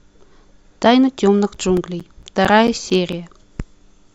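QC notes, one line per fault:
1.32 to 3.58 s, CD scratch ticks: eleven brief ticks, about five per second, each up to around 10 ms, where a disc blemish defeats error correction once per revolution.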